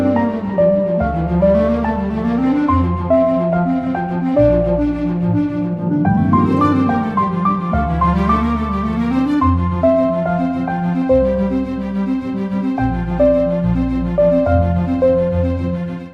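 No technical faults can be heard anywhere in the audio, and the signal holds steady in level and continuity throughout.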